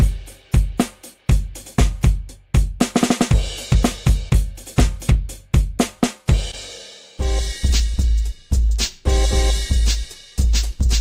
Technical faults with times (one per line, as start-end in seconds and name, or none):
4.29-4.44 skip ahead
4.87-6.33 jitter buffer speed-up